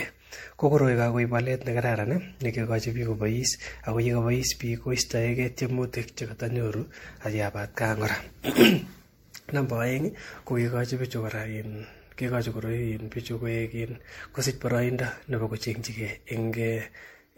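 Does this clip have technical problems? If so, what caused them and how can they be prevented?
Yes. Throughout the speech the sound is swirly, smeared and hollow, with blurred attacks and nothing above 16.5 kHz. This is generation loss, likely from the audio being decoded and re-encoded as MP3 at 64 kbit/s around seven times. Each pass quantises again on a shifted frame grid, so quantisation noise and spectral holes pile up beyond what one 64 kbit/s encode would leave. To prevent it, keep a lossless master and encode to MP3 only once, at the final step.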